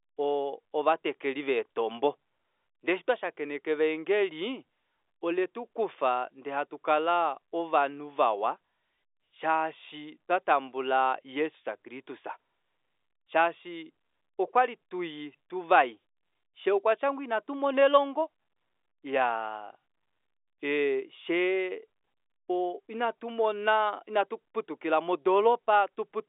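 No technical faults are audible.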